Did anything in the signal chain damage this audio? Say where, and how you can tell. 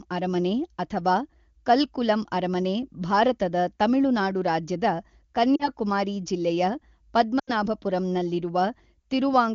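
Yes, on the radio link: lost AMR speech frames at 5.56–5.69 s and 7.39–7.51 s. The decoder bridges each gap by replaying the last good pitch and vocal tract settings at falling gain, so the sound smears and sags for about 40 ms, then 80 ms.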